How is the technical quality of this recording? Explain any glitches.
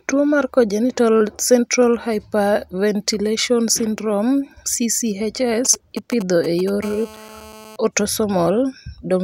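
Two bursts of radio interference from a nearby 2G mobile phone mar the recording, both in the second half of the speech.

From 5.65 to 6.70 s there are GSM signalling bursts. A phone exchanging control traffic transmits in short groups of pulses, and the audio circuitry rectifies them into sound. The result is a galloping dit-dit-dit of short 217 Hz buzzes, roughly 15 dB below the speech. On a spectrogram it shows as clustered vertical stripes with a comb of harmonics spaced at about 217 Hz. The waveform shows clumped spiky bursts.

From 6.83 to 7.76 s a GSM phone buzz follows, about 20 dB below the speech. Once the phone settles into call mode it transmits at 217 bursts per second. Rectification turns that pulse train into a hard, raspy 217 Hz buzz rich in harmonics, with no connection to the speech. A spectrogram shows evenly spaced horizontal lines at multiples of 217 Hz running unbroken across the stretch, and the waveform carries a regular 217 Hz ripple beneath the speech.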